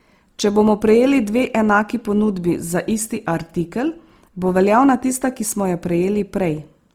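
From start to finish the speech sounds rough and grainy, with a hissy, noise-filled texture in place of clean detail. This is likely Opus compression at a low rate, around 24 kbps. The encoder keeps each band's energy and, short of bits, fills the gaps with folded or noise content. Unlike MP3 damage there are few spectral holes and little swirling, and the audio still reaches about 20.2 kHz, so it isn't muffled.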